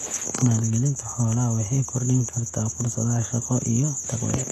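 A short speech recording carries HE-AAC compression damage from start to finish. The damage is plainly audible. The upper spectrum sounds bright but synthetic, and s sounds come out gritty and lispy. Nothing is present above about 12.3 kHz. The likely cause is spectral band replication. The encoder kept only the lower bands and rebuilt the treble by copying them upward under a coarse envelope. The harshness points to a very low rate, around 16 kbps.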